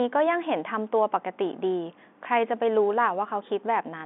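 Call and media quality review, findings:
No faults found: the speech is carried over standard G.711 telephone coding, with the band limited to roughly 200 Hz to 3.6 kHz, consistent with a 64 kbps mu-law line, and no technical defect heard in the signal.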